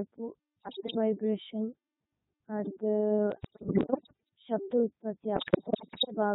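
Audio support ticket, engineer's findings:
Codec 2 vocoder throughout, heavy damage. The link is carrying only pitch, voicing, energy and a coarse spectral envelope per frame, and the decoder rebuilds the speech from sine waves with no original waveform kept. The result is robotic, buzzy speech. The sound fits Codec 2 in its highest-rate mode, around 3.2 kbit/s, and it still degrades everything heavily.

Bit errors on digital voice radio, at 0.60–0.98 s, 3.32–4.29 s (ending just before "ശബ്ദ ഉത്പഥി") and 5.36–6.15 s (starting just after "ശബ്ദ ഉത്പഥി"). Probable cause is fringe coverage on the radio link: corrupted bits land in vocoder frame parameters, so each hit frame decodes with wrong pitch, level or spectrum. Heard as warbles, bleeps, sudden pitch and loudness jumps and garbled robotic babble. The error rate sounds worst in the last burst, at roughly one bit in seven, versus roughly one in ten in the first.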